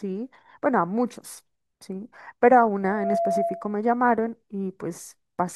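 From 2.83 to 3.84 s the speech is overtaken by loudspeaker feedback squeal: a single tone at 677 Hz swells within about a third of a second to roughly the level of the speech. The microphone is re-amplifying its own loudspeaker, with loop gain above one at that frequency.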